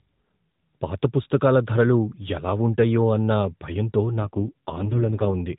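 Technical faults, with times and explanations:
4.22 to 5.36 s, AMR rate drop: just after "ఎలా ఉంటాయో అన్న భయంతో", the radio link weakens and the network pushes the AMR-NB mobile codec down to a lower mode, trading speech bits for error protection. The sound shifts from the lightly coded 12.2 kbps quality to a rougher, buzzier and more synthetic tone, which fits a drop to about 4.75 kbps. The narrowband ceiling near 4 kHz stays the same, and there is no gap.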